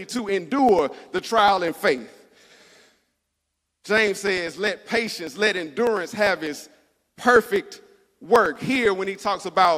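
Periodic USB or driver dropouts run from 0.09 s to 9.65 s, recurring every 0.0995 s, about ten times a second and around a hundred times in all. At each interruption, something blocks the audio path and a sliver of well under a millisecond is skipped outright, so the waveform jumps. The result is a steady, evenly spaced ticking laid over the speech, audible only while sound is present and vanishing in the quiet gaps.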